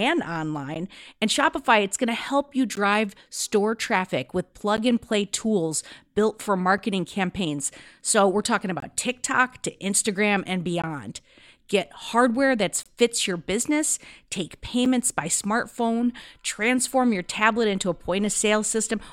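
Short hard-edged dropouts of about 6 to 23 ms cut the speech every 2 s: 0.75, 2.75 (after "going to help you"), 4.77, 6.78, 8.80–8.82 (after "we're talking"), 10.82, 12.83–12.86 and 14.85 s. This is a gap between stream segments: 2 s segment timestamps leave holes the player fills with silence. No audio is lost.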